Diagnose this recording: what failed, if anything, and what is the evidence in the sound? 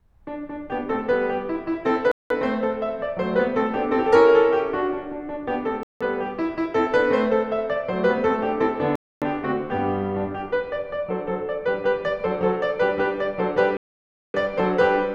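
The music cuts abruptly to silence four times: 2.12 to 2.30 s (about 188 ms), 5.83 to 6.01 s (174 ms), 8.96 to 9.22 s (263 ms), and 13.77 to 14.34 s (572 ms), each time stopping dead and then resuming. This points to the wireless link as the stage at fault, most likely a Bluetooth stall: interference delays packets, the headphones' buffer empties, and playback halts until the retransmitted audio arrives.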